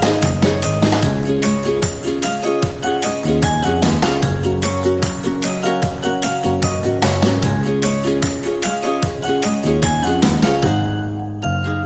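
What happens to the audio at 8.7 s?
Nothing goes wrong at 8.7 s: the audio carries on intact through that moment, with no dropout, click or distortion.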